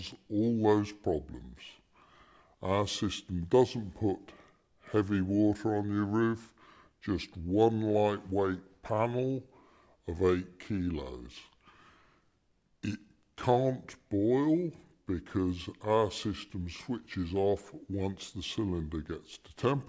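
Wrong sample rate runs through the whole clip, from start to finish: everything plays at about 0.73 times its proper speed, with pitch dropped by roughly 5.6 semitones, so the audio sounds low, slow and dragged. Because speed and pitch fall by the same ratio, the samples are being clocked out slower than they were captured, with no rate conversion in between. That ratio fits audio recorded at 22 kHz but played back at 16 kHz.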